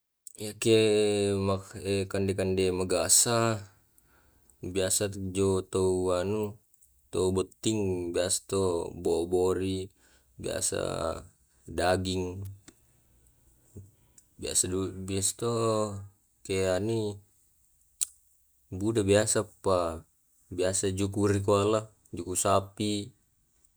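At 12.45 s, a nearby switch or motor likely arced, and the audio line picked up that burst of interference as an electrical switching spike. It sits on top of the speech as a sharp snap, brief and fairly quiet, peaking around -30 dBFS.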